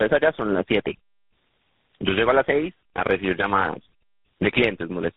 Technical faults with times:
0.00-5.17 tandem speech coding

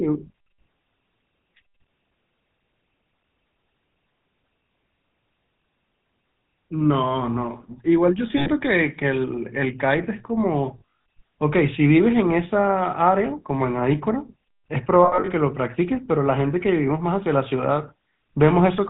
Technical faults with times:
0.00-18.90 GSM full-rate codec
8.38-8.51 lost GSM frames
10.78-10.82 lost GSM frames
15.04-15.31 lost GSM frames

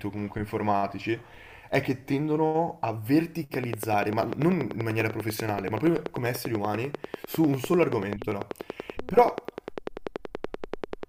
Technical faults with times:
3.54-11.04 train of clicks

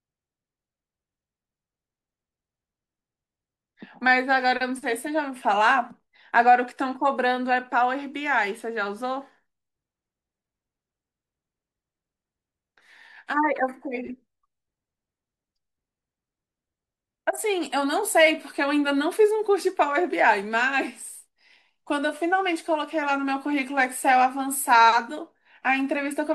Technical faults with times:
none

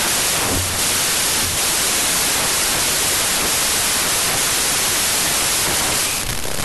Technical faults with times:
0.00-6.64 wrong sample width

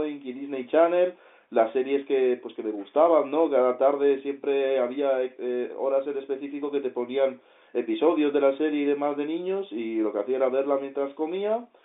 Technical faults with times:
none

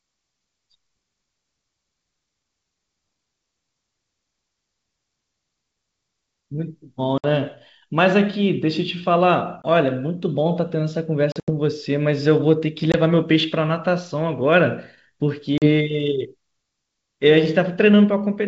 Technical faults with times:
7.18-7.25 packet loss on an ADPCM call
9.62-9.67 packet loss on an ADPCM call
11.32-11.51 packet loss on an ADPCM call
12.92-12.95 packet loss on an ADPCM call
15.58-15.69 packet loss on an ADPCM call

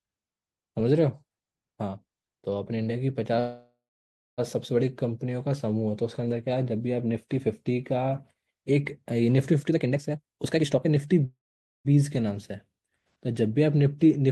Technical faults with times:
3.39-4.40 call audio freeze
9.60-11.20 jitter buffer speed-up
11.25-11.87 call audio freeze

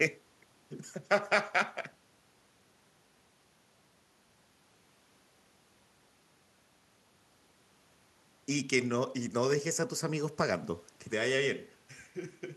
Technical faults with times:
none

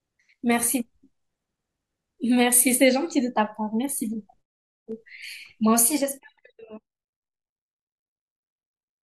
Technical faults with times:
5.70-7.02 zipper noise

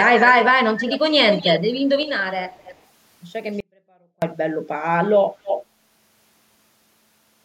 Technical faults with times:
0.00-0.53 echo leak
0.78-0.99 echo leak
1.31-2.11 echo leak
2.51-2.80 echo leak
3.60-4.22 audio dropout to a faint residue
5.44-5.65 echo leak

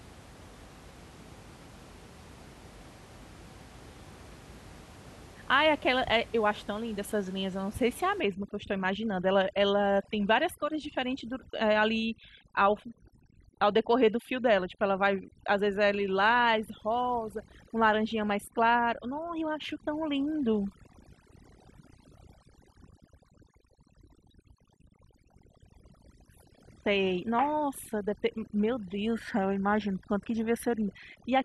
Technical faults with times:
8.20-31.44 overdone noise removal

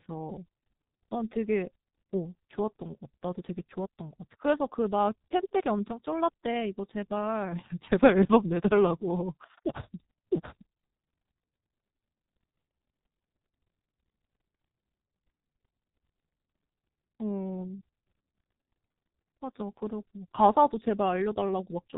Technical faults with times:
0.00-21.98 G.723.1 codec

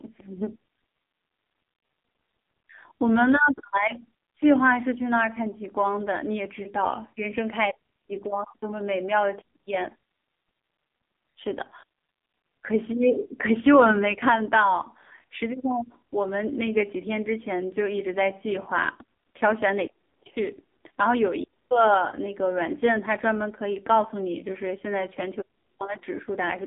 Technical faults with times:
0.00-26.67 AMR narrowband mobile codec

